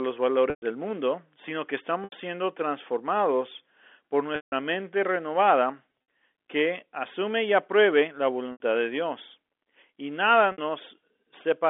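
Packet loss with pitch repetition occurs at 0.5, 2.04, 4.36, 6.07, 8.52 and 10.52 s, losing 120, 80, 160, 100 (scattered), 80 and 60 ms. The receiver loops the last pitch period, giving a held, buzzy tone that fades toward silence in longer gaps.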